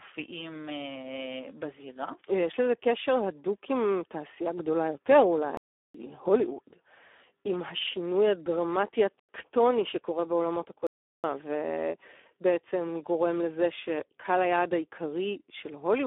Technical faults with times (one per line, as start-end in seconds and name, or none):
0.00-16.06 Speex codec
5.57-5.94 block of digital silence
9.20-9.29 block of digital silence
10.87-11.24 block of digital silence